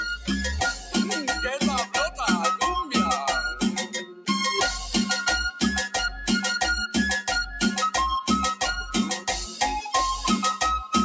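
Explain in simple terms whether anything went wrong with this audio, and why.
Something did go wrong, briefly. From 4.09 to 4.28 seconds, roughly a fifth of a second, the sound was cut by the noise suppressor: the call's noise-reduction step mistook part of the audio for background noise and turned it down. Unlike a dropout, the sound never vanishes completely. It just sinks and thins out, and any lingering or fading part ends early while sharp, sudden sounds still get through. The missing deep bass is normal call microphone processing.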